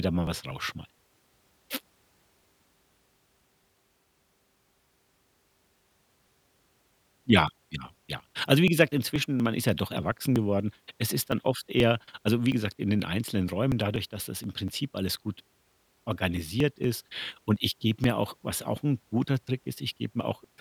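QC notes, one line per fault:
0.27–20.44 s: periodic USB or driver dropouts; a fixed-interval stall skips about 10 ms every 0.24 s, heard as regular ticks during speech.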